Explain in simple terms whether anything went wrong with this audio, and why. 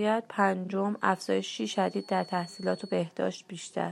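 Something did go wrong here: a feedback whistle sits under the speech from about 0.91 s to 3.09 s. It's a thin, steady tone at around 4.4 kHz, quiet and well below the voice, wobbling a little in level. The likely cause is a loudspeaker feeding back into the microphone, with the loop sitting right on the edge of howling, so that one high pitch keeps ringing without building up into a full squeal.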